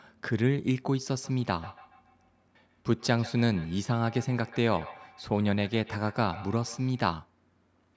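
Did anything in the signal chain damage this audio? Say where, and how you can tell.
Yes. A feedback echo between two devices damages the call stage from 1.18 to 7.15 s. The speech returns roughly every 150 ms, thinner and ringing, peaking about 19 dB below it. Another device replays this microphone's signal, which the local echo canceller cannot remove.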